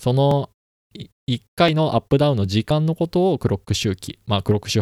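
Dropped buffers (overrun) at 0.31, 1.68, 2.71 and 4.10 s: each is a jump where the speech skips ahead by about 20 ms, about 10 ms at 1.68 s. This is likely samples overwritten before being read, with the surrounding audio spliced directly together.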